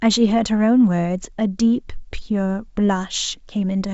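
No technical faults can be heard anywhere in this speech.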